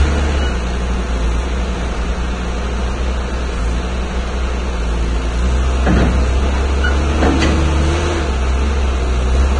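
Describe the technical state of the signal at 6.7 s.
At 6.7 s the audio carries the same damage heard across the whole clip, which is likely Vorbis compression at a low bitrate, consistent with roughly 24 kbps. Nothing is present above 9.7 kHz, so the top of the spectrum is dull. The remaining treble has been quantised so coarsely over the coded spectral floor that fine detail turns into hiss-like grain of similar energy. Tonal parts sound roughened and transients lose their sharp attack.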